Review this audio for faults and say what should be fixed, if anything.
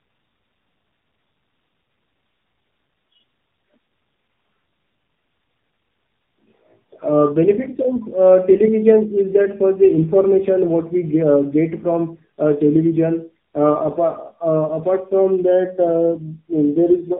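Throughout the speech, the sound is rough, muffled and warbly, with nothing above 3.7 kHz. This is tandem speech coding. The call appears to have passed through two narrowband speech coders in a row, with a plain telephone link between them, which fits AMR-NB at two different rates. Each coder re-encodes the previous one's already damaged output, so their distortions stack and the second, lower-rate pass compounds the smearing. Preventing it means carrying the coded speech transparently end to end, through transcoder-free operation or a single common codec, so the call is encoded only once.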